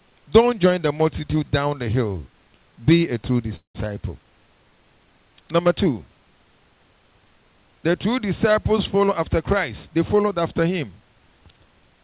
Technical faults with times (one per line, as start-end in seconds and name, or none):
3.56-3.76 call audio freeze
9.04-11.17 jitter buffer speed-up